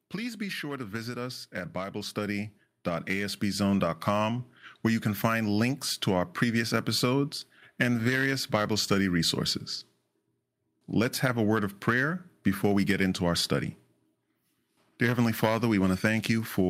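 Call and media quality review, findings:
Automatic gain rising, 1.5–3.91 s, after "sure to visit us": AGC read input as too quiet, ramped gain about 8 dB; voice and background swell together.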